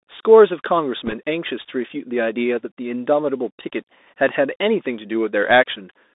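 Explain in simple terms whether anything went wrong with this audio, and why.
Yes, two things went wrong. Throughout, the speech sounds thin, muffled and plainly scratchy, with a grainy hiss underneath and rough s sounds. That is the Bluetooth CVSD headset codec: it keeps only roughly 250 Hz to 3.7 kHz and tracks the sound in tiny up-or-down steps that can't keep pace with sharp, bright sounds.

From 1.06 to 1.14 s there is a brief burst of rushing, crackly noise, with no loud click. These are bit errors on a Bluetooth voice link: a couple of bits in every hundred got flipped in transit, and each one disturbs the sound more the louder the speech is, then quickly fades out.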